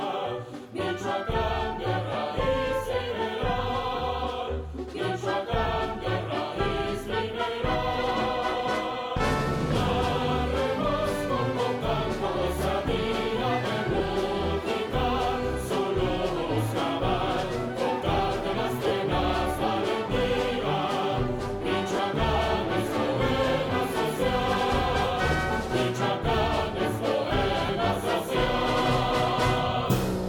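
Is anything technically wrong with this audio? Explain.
Yes. Lost LE Audio frames occur at 2.13 s, 13.92–14.00 s, 18.87–18.91 s, 21.96–21.99 s and 27.66–27.69 s, with 10 to 40 ms missing each time, fitting 10 ms frames. The LC3 decoder conceals each gap by reusing the previous spectrum with random signs, so tonal content briefly smears into noise.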